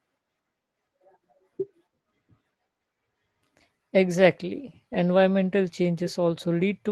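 No technical faults can be heard in the speech, which comes through the call path with only the ordinary character of its codec.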